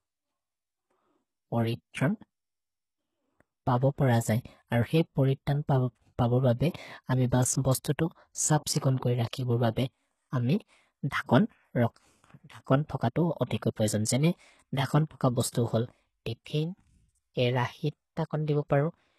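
Speech runs the whole 19 s with plainly audible codec damage, likely HE-AAC compression at a rate that points to around 16 kbps. Nothing is present above 12.3 kHz. What separates it from an ordinary low-bitrate lowpass is that the upper band is still filled, but with copied lower-band material shaped by a coarse envelope. Its harmonics don't line up with those below the crossover, so sibilants come out gritty, metallic or lispy rather than simply dull.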